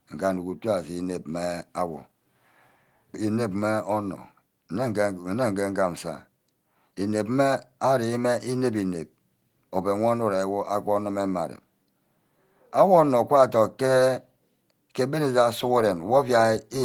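No faults can be heard anywhere in this audio.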